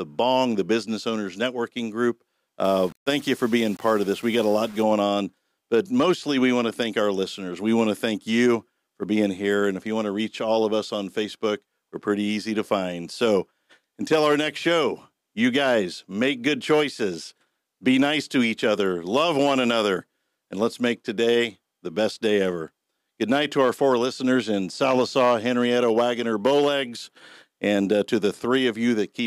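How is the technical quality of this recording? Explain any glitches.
The recording has one clear glitch, from 2.64 to 4.83 s, where the audio turns grainy. This is most likely low bit depth without dither: rounding to about 6 bits leaves quantisation error roughly 25 dB below the signal that tracks it, so quiet passages sound gritty and sputtering. A waveform shows visible stair-steps, and a spectrogram shows signal-following distortion smeared across the spectrum in that stretch.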